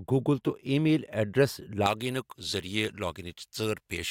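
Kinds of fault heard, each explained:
Pre-emphasis left on: from 1.86 s to the end, the treble has been boosted for recording or transmission and the matching de-emphasis cut never applied, leaving the top about 11 dB stronger at 10 kHz than at 1 kHz, a rise that fits a J.17 curve. The speech turns thin, bright and hissy on sibilants. The switch from normal balance partway through, and a lift that climbs steadily upward rather than a narrow presence peak, set it apart from an ordinary bright microphone or EQ.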